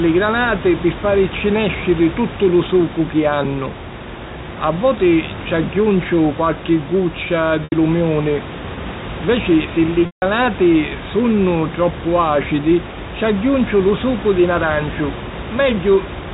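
At 7.64 s, after "ci agghiunciu qualchi guccia", packet loss with pitch repetition leaves an 80 ms gap bridged by a repeated pitch period, heard as a brief buzzy hold. At 10.06 s, after "si li", a 160 ms loss fades to silence before the sound cross-fades back.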